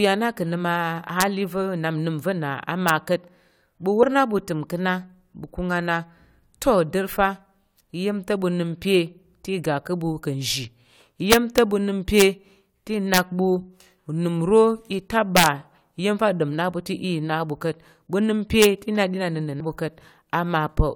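Violent, splintering cracks hit loud peaks of the speech at 1.21 s and 2.89 s. This is integer overflow: samples pushed to the top of the integer range wrapped to the opposite sign instead of being held at the limit, so each peak flips across the full scale.

At 4.02 s a brief glitch cuts through. This is damaged data in a compressed stream: corrupted bytes made the decoder misread the frames there, lose sync and jump to the next frame header.

The overflow cracks return, harsher, with peaks about 1 to 3 dB past the limit, from 11.32 to 11.58 s, then from 12.20 to 12.22 s, 13.14 to 13.18 s, 15.37 to 15.46 s and 18.62 to 18.65 s. Each is far sharper than ordinary clipping.

A second stream-damage blip lands at 19.59 s.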